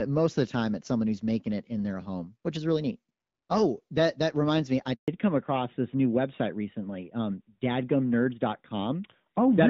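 Right after "that reminds me I", the speech cuts out abruptly at 4.94 s and stays silent until 5.08 s, a hole of 140 ms in which whatever was being said is simply missing. The sound dies away within a few tens of milliseconds. This is a handover gap: the phone switched the call between networks, and no speech frames reached the receiver until the new link was established.

When the speech returns at 5.08 s, it is duller and rougher than before, and stays that way to the end. The crisp upper range heard earlier through the AMR wideband (HD Voice) codec, which carries content up to about 7 kHz, is gone, with nothing above 4 kHz. This is a fallback to narrowband, which fits the call moving from AMR-WB at around 12.65 kbit/s to the older AMR-NB codec at 12.2 kbit/s after the handover.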